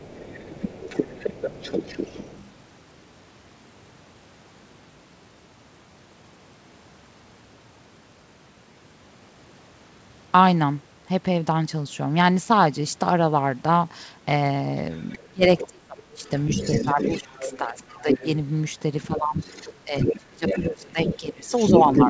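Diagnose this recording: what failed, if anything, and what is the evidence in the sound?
Other side's voice leaking through at 0 to 2.47 s, 14.91 to 15.68 s and from 16.24 s on. It sits roughly 5 to 15 dB under the talker. The call echo canceller likely left loudspeaker echo behind.

Speech suppressed in double talk at 15.18 to 16.3 s, 16.84 to 18.24 s and from 19.08 s. The talker dips by up to about 30 dB. The echo canceller likely turned both sides down.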